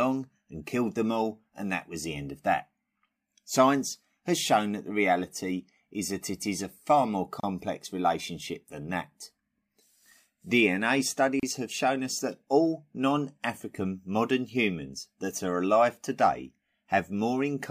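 At 7.40 s, between "is a far more" and "relationship than that", the speech drops out for about 32 ms, and at 11.40 s, just before "have shown us", it drops out again for about 33 ms. Each time the hole has smeared edges, then the speech resumes exactly where it stopped. These are gaps at a join of encoded pieces: separately encoded segments were spliced without trimming each encoder's leading delay and final-frame padding.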